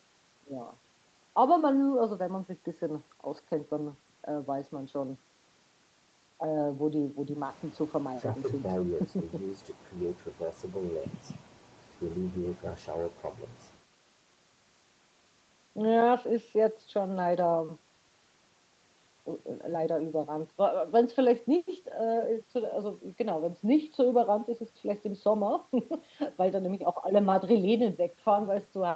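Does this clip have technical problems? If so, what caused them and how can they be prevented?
No, nothing here needs fixing: it's speech carried over an ordinary call connection, and the top end stopping at about 8 kHz is just what that kind of call codec does, so there's no problem to prevent.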